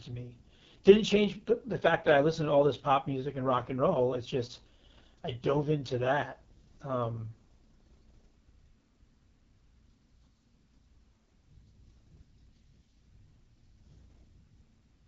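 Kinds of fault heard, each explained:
AMR wideband (HD Voice) codec: speech sounds rough and raspy, with nothing above 7.4 kHz, which fits AMR-WB at its lowest 6.6 kbit/s mode.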